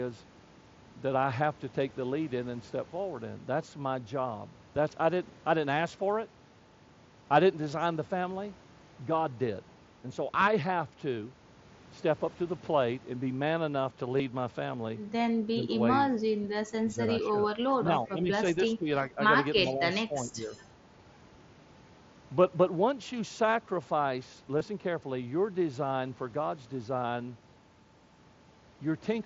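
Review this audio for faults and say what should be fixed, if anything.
At 14.18 s and again at 24.59 s there are two tiny patches of concealed Bluetooth headset packet loss. Each is about 15 ms, which fits two lost mSBC frames. The receiver filled each gap by repeating a matching slice of the waveform just before it. A cleaner radio link, with the phone closer and less 2.4 GHz congestion, would prevent them.

Between 15.55 and 20.51 s the voice keeps ducking. The dips run 15.55–15.74, 16.37–17.02, 17.8–19.18 and 19.65–20.51 s, mostly about 10 dB down, with the 16.37 s stretch sinking about 20 dB. That points to speech suppressed in double talk, likely the echo canceller clamping down while both sides talked. A canceller with better double-talk detection would prevent this.

Right at 19.66–19.74 s there's a faint delayed copy of the voice, sitting about 25 dB under the speech and trailing by 379 ms. 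That's echo leak, likely from a far-end loudspeaker whose canceller let some residue back into the line. Tuning that device's echo canceller or using a headset there would prevent it.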